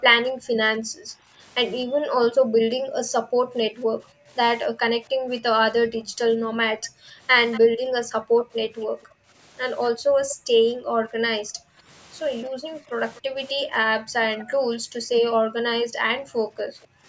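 A speech recording in which the room background is gated by the echo canceller from 0.32 to 17.05 s: ambience repeatedly dips as far as about 40 dB, roughly ten seconds in all, tracking far-end playback rather than the talker's own pauses. Faint delayed copies of the speech, 236 ms behind, sit at 7.52–9.04, 10.29–10.36, 13.16–14.45 and 16.82–16.87 s, about 15, 15, 20 and 35 dB below the speech. This is likely an echo leak from a loudspeaker endpoint, not room reverberation, because each copy is a discrete repeat at a fixed lag rather than a smooth decay.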